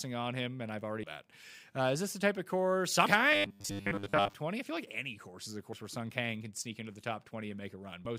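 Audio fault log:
1.02 s, 3.05 s, 5.72 s, 8.04–8.06 s: damaged data in a compressed stream. Brief glitches after "on him and I've", "the type of course" and "any course is a". Each comes as the decoder loses frame sync and searches for the next frame header, unlike a steady buzz.
3.32–4.33 s: robotic sound from repeated short buffers. A rigid metallic 100 Hz buzz roughly tracks the speech, with most of the audio replaced. This is likely from a roughly 10 ms chunk being replayed, not from isolated glitches.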